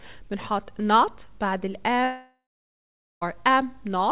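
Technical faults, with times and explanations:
2.04 to 3.23 s, long network dropout: the likely cause is that packets stopped arriving for about 1.2 s, so the receiver had nothing real to play. It stretches the last sound into a buzzy, hissing fill that fades within a few tenths of a second, leaving about 0.8 s of near-silence. The audio resumes at 3.23 s with the missing stretch simply gone, over a narrowband call path that carries nothing above 4 kHz.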